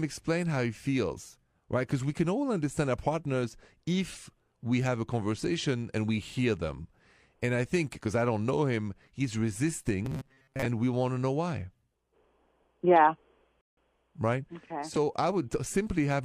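From 10.05 to 10.66 s, just before "we want to know", the speech turns into a rigid, metallic buzz at 133 Hz that follows the syllables only loosely. This is robotic sound from repeated short buffers, likely caused by audio arriving too slowly. Segments of about 7.5 ms were replayed back to back, making up around 70 percent of the span, while the real signal was skipped, and that repetition period sets the fixed pitch.

At 13.61 s there is a rebuffering stall. Playback drops to silence for about 160 ms and then resumes at exactly the point where it stopped. The player ran out of downloaded audio and waited for more, so nothing is missing from the speech, but a short gap is added to the timeline and the speech arrives correspondingly late from there on.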